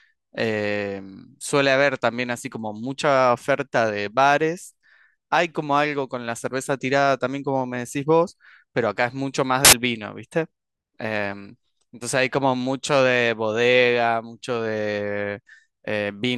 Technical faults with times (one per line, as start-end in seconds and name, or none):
9.65-9.73 samples built from the wrong bytes